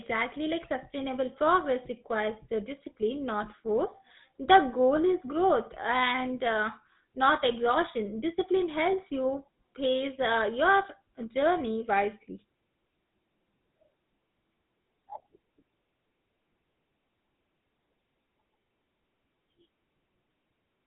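Throughout, the speech has passed through the GSM full-rate codec, whose plainly audible damage fits a 13 kbps rate. It rebuilds the voice from a vocal-tract model driven by sparse pulses, leaving a buzzy, gravelly roughness, and nothing survives above 3.8 kHz.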